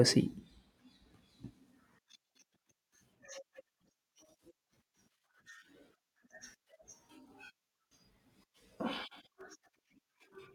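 Speech clip where, from 9.09 to 9.90 s, the processor falls behind and misses around ten tiny buffers of roughly 1.5 ms each, leaving brief silent gaps heard as processor overload crackle.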